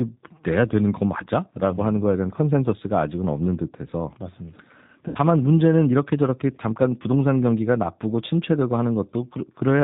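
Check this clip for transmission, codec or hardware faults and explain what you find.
Two faults are audible: a low-rate speech codec throughout and one concealed packet loss.

The G.729 codec runs the whole clip. Speech is rebuilt from a filter, pitch and sparse pulses, fitting 8 kbit/s, so it sounds band-limited, rough and synthetic.

From 5.08 to 5.18 s, VoIP packet loss is concealed by the speech codec. The decoder stretches its last sound into a fading buzzy tone or coloured noise, matching about 70 ms of missing frames.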